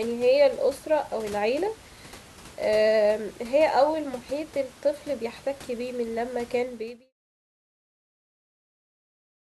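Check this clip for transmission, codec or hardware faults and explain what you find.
No transmission, codec or hardware faults can be heard in this speech recording. The room's background noise sits about 22 dB below the speech as part of the recording, and the level fades out smoothly from around 6.5 s to 7.13 s, as an editor would finish a clip.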